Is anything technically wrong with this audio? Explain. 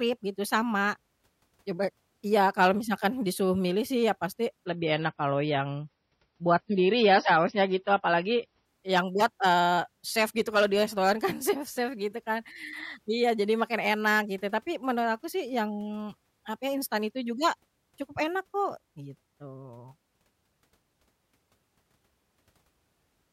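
Yes. From 4.66 to 8.66 s, between "milih sih iya pasti" and "yang buat eee chef", the speech drops to an adaptive stream at a lower bitrate. A slowed connection forced a much smaller MP3 encoding, which fits about 24 kbit/s instead of 128. The switch is sudden and gapless. Treble vanishes above 5.9 kHz, leaving dull, smeared sound, and a spectrogram shows a flat ceiling across that stretch.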